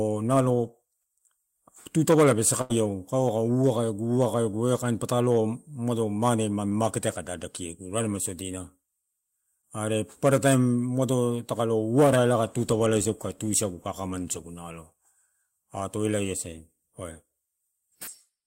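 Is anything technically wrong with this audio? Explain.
Yes. From 2.61 to 2.72 s the speech stalls into a held, fading sound and then jumps ahead. This is a burst of packet loss: about 80 ms of audio never arrived, and the receiver stretched the last sound over the gap before resuming later. At 6.70 and 9.62 s there are brief smears lasting a few hundredths of a second. These are short concealed packet losses: 20 ms went missing each time, and the decoder continued the preceding sound to cover it, adding roughly a hundredth of a second.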